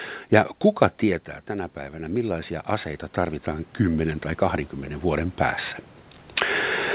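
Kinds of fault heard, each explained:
Automatic gain rising: at 1.0 s the input falls by about 12 dB as the talker moves away, and the gain control responds slowly, adding about 11 dB by 4.31 s, so the voice and the room noise swell together over roughly three seconds.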